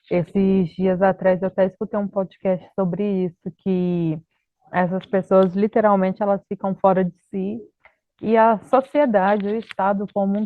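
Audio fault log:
0.00–2.00 s, adaptive stream starting at a low bitrate: the speech opens dull and smeared, with thin or synthetic-sounding treble and heavier codec artefacts, which fits an Opus stream near 24 kbit/s. Clarity then jumps abruptly, with no gap, consistent with a switch to roughly 64 kbit/s.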